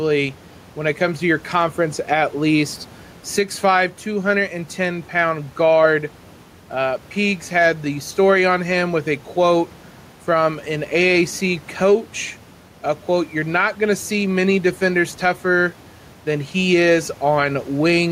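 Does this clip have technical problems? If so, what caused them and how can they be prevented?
Yes. Gain pumping runs through the whole recording. The room noise sits about 29 dB below the speech, and the gain swings by roughly 5 dB. The likely cause is input gain set far too high, with a fast limiter pulling it down. Prevent it by lowering the input gain and easing the limiter.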